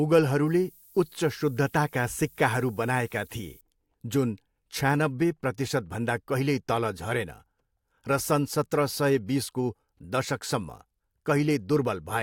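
From 0.46 to 3.61 s, low bit depth with noise shaping adds a thin, steady hiss rising toward the treble. The coarseness fits roughly 9 bits, with noise about 25 dB below the speech.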